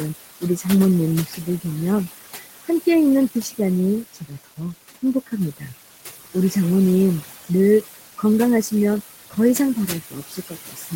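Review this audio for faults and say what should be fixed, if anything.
Noise suppressor artifacts run through the whole clip. The suppressor pulls the room noise, which sits about 11 dB under the speech, down by about 15 dB between phrases and lets it back up under speech. That frame-by-frame processing makes the background sink and rise with the speech. A gentler reduction setting with slower attack and release would avoid this.

Speech cut by the noise suppressor happens at 0.41 to 0.66 s, 1.26 to 1.47 s, 4.13 to 4.59 s, and 10.09 s to the end. Quiet speech there was mistaken for noise and turned down by about 11 to 18 dB, so those sounds come out swallowed. A lower suppression threshold or a speech-aware noise estimate would prevent this.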